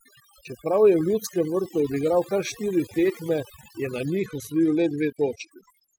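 From the first moment, the speech carries overdone noise removal. A suppressor set far too hard has pulled every frequency band near its noise estimate down to almost nothing, taking the softer edges of the voice with them. The background sinks to near silence dotted with twinkling specks. On a spectrogram the gaps between syllables are bare black, scattered with isolated bright dots, and the speech itself looks patchy, with holes punched through its harmonics.

At 4.16 s, just after "je na", a Bluetooth SBC bit pool drop sets in and lasts to the end of the clip at 5.99 s. The link seems to have been congested, so the sender cut the bits per frame. The upper sub-bands get few bits or none, and what remains is quantised coarsely. The treble goes dull and a gritty hiss rides on the voice. The sound points to a bit pool falling from 31 to 13, around 94 kbps. A spectrogram shows the energy in the top bands cut off abruptly at 4.16 s, with grainy noise filling the lower bands.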